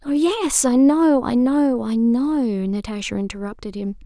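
A short bit of speech, and nothing technically wrong turns up in it anywhere, so there's nothing here to pin a time or a cause on.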